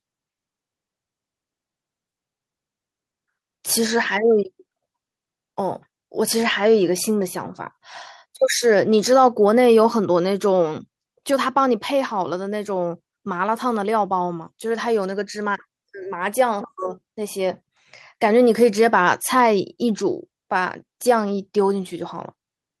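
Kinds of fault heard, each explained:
No kinds of fault are heard in the speech.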